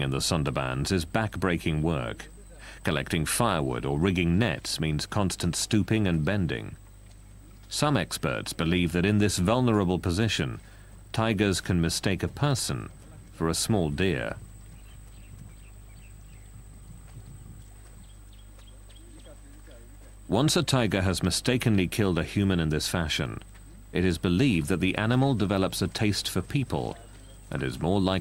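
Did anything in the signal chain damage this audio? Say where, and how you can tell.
No, nothing in the signal chain damaged this audio.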